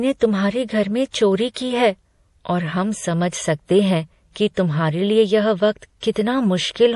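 MP3 compression runs through the whole clip. The speech has nothing above 11.5 kHz, and the damage is plainly audible as a watery, swirling texture. S sounds turn metallic and chirpy, and consonant attacks smear. The likely cause is an encoder starved of bits, consistent with a low rate around 48 kbps. It cuts the treble at a fixed point and drops weak frequency lines, which flicker on and off between frames.

Pre-echo appears four times. The first is from 1.54 to 1.56 s, spreading about 24 ms ahead of an attack, after "तुम्हारे घर में चोरी" and before "की है और". The next is from 3.29 to 3.33 s, spreading 34 ms. Another is from 4.54 to 4.57 s (29 ms), between "हैं कि" and "तुम्हारे लिए यह वक्त". The last is from 6.00 to 6.03 s (23 ms), after "तुम्हारे लिए यह वक्त". In each case a sharp onset sits late in a transform block, and the coding noise spreads back into the quiet just before it. 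A brief hiss leads each attack, which then sounds soft.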